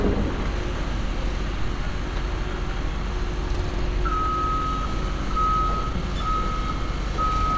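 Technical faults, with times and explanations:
3.94–5.34 s and 5.78–7.15 s, jitter buffer speed-up: With excess audio queued, the receiver repeatedly cut pitch-period-sized slices to catch up. The sound runs about 3% then 9% fast at unchanged pitch, so the second stretch feels hurried. The first stretch loses roughly 40 ms and the second roughly 150 ms. The waveform shows whole cycles removed and the remaining cycles seamlessly joined, and spectrogram events arrive early with harmonics unshifted.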